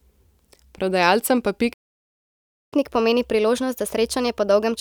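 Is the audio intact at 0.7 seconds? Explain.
Yes, the speech at 0.7 seconds plays through intact, with no fault at that moment.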